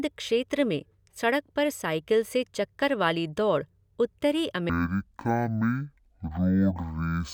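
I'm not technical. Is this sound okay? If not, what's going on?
No. From 4.69 s to the end, the fault is stereo read as mono: the two channels' samples, stored alternately, were played back as one stream. That doubles the playback time, so the speech runs at half speed and sounds a full octave lower.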